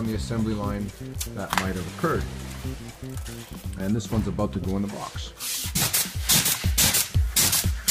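No technical faults can be heard in this clip. At no point does anything in the sound call for comment.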